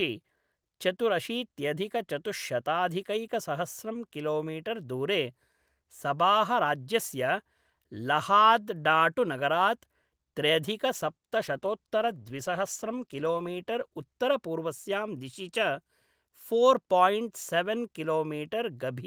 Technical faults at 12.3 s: call bitrate drop

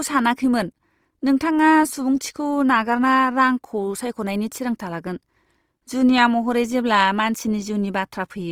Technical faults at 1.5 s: Opus compression

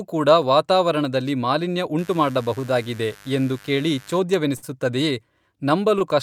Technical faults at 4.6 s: short stall from a late packet

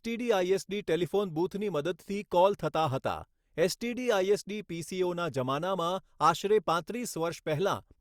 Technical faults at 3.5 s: none

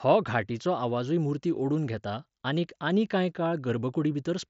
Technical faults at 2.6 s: none

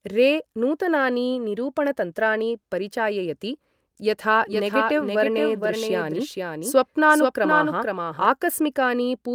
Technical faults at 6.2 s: doubled audio track

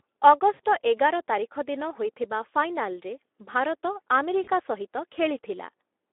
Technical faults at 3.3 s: Speex codec

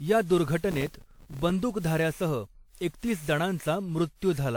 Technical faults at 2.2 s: generation loss

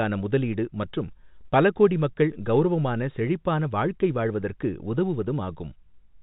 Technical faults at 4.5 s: none

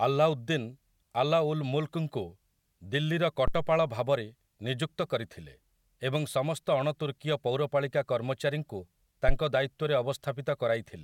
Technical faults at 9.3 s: phantom power thump

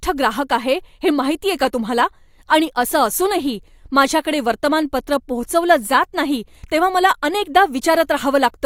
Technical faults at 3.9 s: none

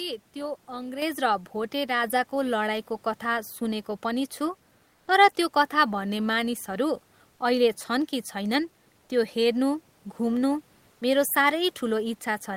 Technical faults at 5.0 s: comfort noise in place of the background

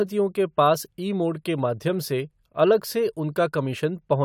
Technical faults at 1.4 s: none

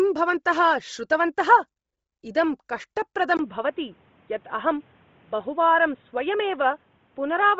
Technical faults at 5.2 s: Bluetooth LC3 compression; input switched to a poorer device

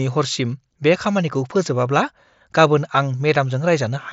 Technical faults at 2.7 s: none

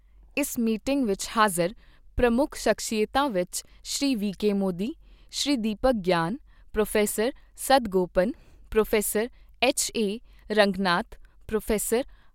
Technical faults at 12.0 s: none

